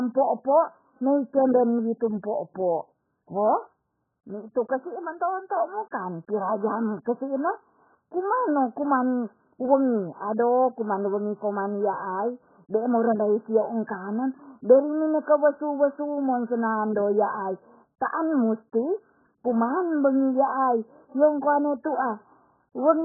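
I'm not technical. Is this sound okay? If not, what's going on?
No, the speech has two problems. AAC compression damage runs through the whole clip: nothing is heard above about 1.7 kHz, so the sound is dull and muffled, with a watery, warbling texture on held sounds and hiss-like consonants. The likely cause is very heavy data squeezing. The encoder saves space by throwing away the high frequencies and coarsely rounding off what remains, and those rounding errors are what you hear as smearing.

Pre-echo occurs at 5.91 s: a brief hiss, about 13 milliseconds long, arrives just before a sharp onset, and the onset itself sounds soft rather than crisp. This happens because the encoder works on short chunks of sound at a time. When a sudden loud moment lands late in a chunk, the noise meant to be hidden under that loud moment spreads across the whole chunk, including the quiet instant before it.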